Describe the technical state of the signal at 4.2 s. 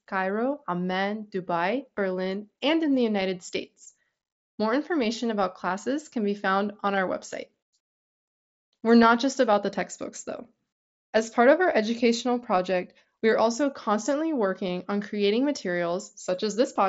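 At 4.2 s the speech is intact, carried through the Bluetooth mSBC headset codec with only its light coding grain and nothing above about 7.7 kHz.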